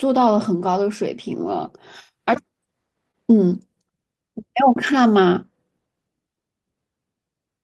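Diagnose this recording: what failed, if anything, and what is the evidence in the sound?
A brief smeared wobble in the speech at about 3.11 to 3.16 s is short concealed packet loss at the network stage. Roughly 20 ms of audio arrived too late for the decoder, which extended the preceding sound for 23 ms before blending back into the real signal.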